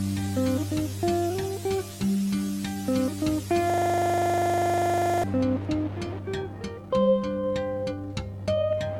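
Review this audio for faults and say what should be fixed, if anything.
The music freezes into a system hang loop from 3.70 to 5.24 s. A 40 ms slice of audio repeats exactly, dozens of times in a row. At 25 repeats per second, it sounds like a rough, stuttering buzz rather than music. The computer or audio driver stalled, and the playback hardware kept cycling the same short ring buffer until the system recovered. To prevent this, find and remove the stall, and mute output whenever the buffer stops being refilled.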